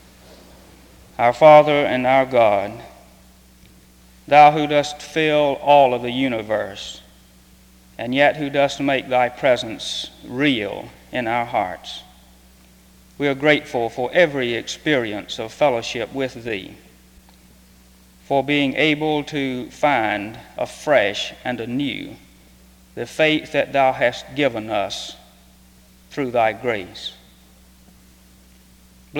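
No technical faults can be heard anywhere in the clip. The audio runs without any break, glitch or distortion that would point to a problem in the recording or playback chain.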